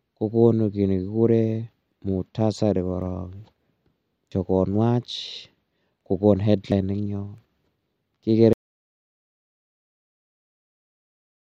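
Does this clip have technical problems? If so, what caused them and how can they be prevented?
Yes. There is audio missing between chunks at 1.92, 4.32 and 6.72 s, where the speech skips forward by roughly a tenth of a second each time with no pause at the joins. The regular spacing of about 2.4 s points to fixed-length chunks of roughly 2.5 s, and a short piece was likely lost each time one chunk was closed and the next opened. On a waveform, each join shows an abrupt change in shape. On a spectrogram, it shows a vertical seam where the harmonics jump. To prevent it, buffer continuously across chunk boundaries with overlap or double buffering so no samples are dropped.

There is also an audio dropout to silence from 8.53 s to the end. The speech cuts off mid-flow and is replaced by silence, without even room tone. The likely cause is lost input, such as a disconnected device, a failed link or an accidental mute, while the recorder kept writing silence. 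The waveform flattens to a straight line, and the spectrogram goes completely blank from that point. To prevent it, monitor the input level during recording and raise an alert on sustained digital silence.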